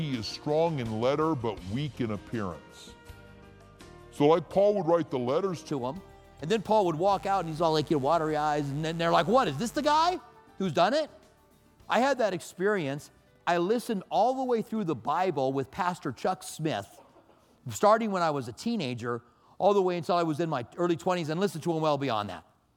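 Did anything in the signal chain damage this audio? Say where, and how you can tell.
Yes. From 0.00 to 5.71 s a section plays at the wrong speed, 0.8 times normal, so pitch drops roughly four semitones and everything sounds deep and slow. The likely cause is a playback or editing clock mismatch. A spectrogram shows all harmonics compressed downward, snapping back at 5.71 s.

Between 7.08 and 10.16 s there is mains buzz in the analogue wiring: sharp switching spikes at twice 50 Hz, about 25 dB below the signal, forming a raspy tone. A spectrogram shows evenly spaced 50 Hz harmonic lines reaching into the kilohertz range; the waveform carries regular 10 ms spikes.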